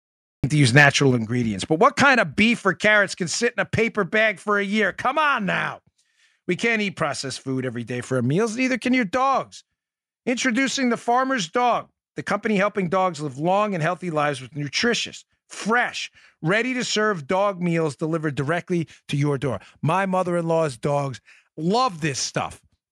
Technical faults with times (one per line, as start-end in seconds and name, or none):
0.00-0.44 cut-off start
0.76-0.84 microphone overload
1.11 microphone volume stepped down